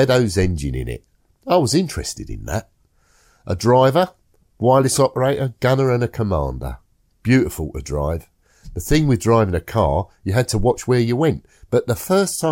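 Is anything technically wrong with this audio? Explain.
No, nothing is technically wrong with this audio.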